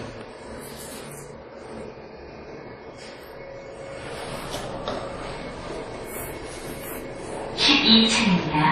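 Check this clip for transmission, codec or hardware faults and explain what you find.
There's one fault, and it runs the whole way through: transcoding between lossy codecs. Nothing comes through above 15.2 kHz, and two different flavours of swirly, smeared compression artefacts overlap. That's likely a low-bitrate MP3 re-encoded to an even lower-bitrate WMA, with the second encoder spending its bits on the first one's damage.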